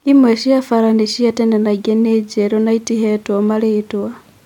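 No technical faults can be heard anywhere in the recording, so there is nothing to place in time order.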